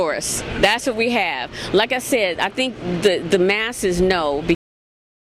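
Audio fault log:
4.55–5.23 s cut-off end: the sound stops mid-event with no decay because the final buffers were never written. Unlike a dropout, nothing returns afterward.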